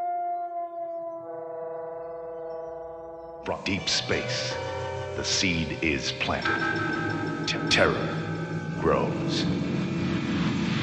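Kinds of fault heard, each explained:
Digital radio blending to analogue: the receiver lost its digital stream and cross-faded over about 166 ms to the station's FM broadcast, staying there from 3.42 to 7.61 s before returning. On a spectrogram, a broadband hiss floor appears, roughly 30 dB below the signal. The waveform drops about 2 dB during that span, with smooth ramps at each end rather than hard edges.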